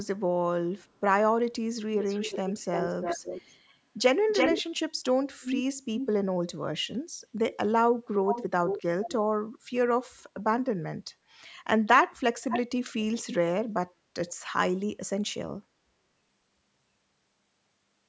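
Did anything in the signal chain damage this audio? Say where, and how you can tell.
Yes. A delayed second copy of the speech trails the live speech at 2.07–3.74, 4.28–4.62, 5.41–5.56, 5.98–6.07, 8.25–9.13 and 12.49–13.36 s. It lags by 335 ms in the first four stretches, 437 ms at 8.25 s and 512 ms at 12.49 s. It sits roughly 5 to 10 dB under the speech and reaches equal level around 4.3 s. This is echo leak at the call-processing stage, likely a far-end loudspeaker's echo canceller failing to subtract what its microphone picked up.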